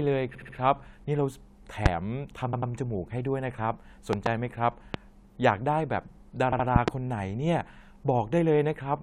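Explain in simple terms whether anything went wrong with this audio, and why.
The speech stutters at 0.34 to 0.55 s, 2.52 to 2.71 s and 6.51 to 6.65 s. These are repeated frames, where short chunks get played again and the clip grows longer.

Sharp clicks land on top of the speech at 1.86 s and 4.94 s, with double pops at 4.13 to 4.29 s and 6.76 to 6.90 s. This loud pop is likely from an electrical spike.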